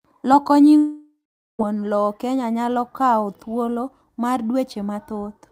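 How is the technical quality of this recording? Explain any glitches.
The recording has one clear glitch, a long network dropout. From 0.77 s to 1.61 s the speech breaks off. The last sound smears into a fading buzz, then about 440 ms of silence follows. About 820 ms of audio never arrives, likely because packets stopped reaching the receiver. The speech then resumes past the missing stretch.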